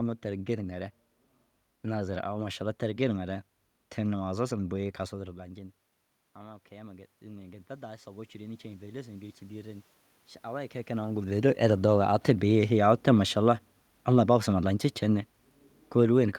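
From 6.36 s to 9.91 s the automatic gain rises. After the talker moves away from the microphone at around 5 s, the input level falls by about 18 dB. The gain control reads this as a quiet source and slowly adds about 9 dB over roughly three and a half seconds. The voice climbs back gradually rather than at once, and the room noise swells with it, because the gain applies equally to everything the microphone picks up.

From 11.32 s to 15.32 s the automatic gain falls. Around 10.5 s the talker moves again, and the gain control finds the input too loud, or its background noise too strong, for the gain still set high from the earlier boost. The control responds by pulling the gain down by about 4 dB over four seconds. The voice starts out loud, then sinks steadily, and the background room noise drops with it instead of staying at a constant level beneath it.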